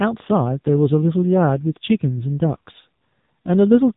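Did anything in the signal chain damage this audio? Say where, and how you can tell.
Yes, AMR narrowband mobile codec damage runs through the whole speech clip at the codec stage. Nothing passes above 3.8 kHz, and the voice sounds heavily buzzy and synthetic. A vocal-tract model driven by sparse pulses is replacing the waveform, which fits AMR-NB at roughly 6.7 kbps.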